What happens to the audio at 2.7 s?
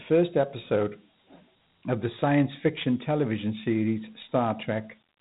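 At 2.7 s the speech carries Dialogic VOX ADPCM damage, present across the whole clip. The 4-bit adaptive coding, consistent with a 32 kbps stream, leaves a plainly audible gritty hiss riding on the speech, and nothing survives above 3.8 kHz.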